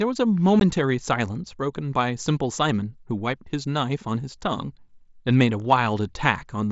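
A single abrupt gap cuts into the speech at about 0.60 s, a hole of roughly 15 ms with hard edges, and the sound resumes immediately with no smoothing over the break. It is unconcealed Bluetooth headset packet loss: a couple of voice packets between headset and phone never arrived, which fits two lost frames of about 7.5 ms. The link carries wideband mSBC, with its usual light grain on louder passages.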